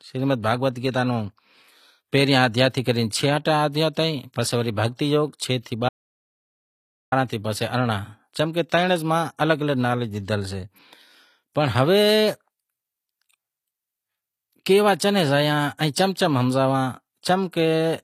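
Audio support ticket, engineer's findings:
Whole clip: gritty, lispy treble on the speech, plainly audible. Likely HE-AAC compression: upper band rebuilt by spectral band replication, copied up from lower bands, so harmonics don't line up. Nothing above 14.9 kHz, fits a low bitrate, around 24 kbps.

5.89 to 7.12 s: audio dropout to silence right after "یوگ چھ سیں", about 1.23 s of silence, no room tone. Likely input lost upstream (device or link) while the encoder kept writing silence; that stretch of speech is gone.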